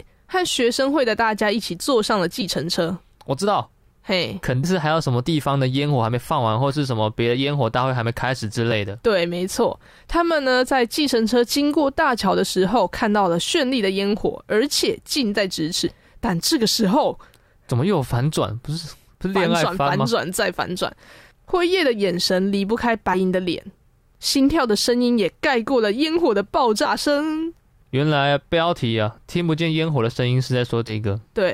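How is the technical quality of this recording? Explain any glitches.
The speech is interrupted by seven small forward jumps.

Compressed frames skipped at 2.41, 4.63, 8.71, 15.87–15.94, 23.13–23.16, 26.85 and 30.87–30.92 s: whole blocks of encoded audio never play, so speech leaps ahead by roughly 20 to 150 ms, in steps that fit 20 ms frames.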